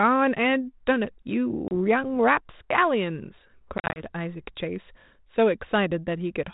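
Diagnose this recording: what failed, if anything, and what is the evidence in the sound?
Packet loss on an ADPCM call, at the network stage: a hard-edged silent gap of about 30 ms at 1.68 s, then scattered dropouts from 3.78 to 4.11 s, the longest 40 ms. The waveform shows flat runs and the spectrogram blank vertical slots, each followed by slightly distorted speech while the decoder's predictor and step size realign.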